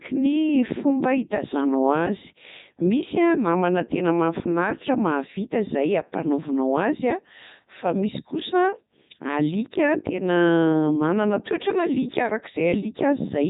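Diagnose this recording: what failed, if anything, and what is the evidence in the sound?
The failure is at the codec stage: the speech has passed through a Codec 2 vocoder for the whole clip. It sounds robotic and buzzy throughout, with nothing above 3.8 kHz, which fits Codec 2's top 3.2 kbit/s mode. The decoder rebuilds the voice from sine waves using only sent pitch, voicing, energy and envelope, so the original waveform is gone. A plain band-limit or transform codec would keep the natural voice texture and just sound duller or swirly.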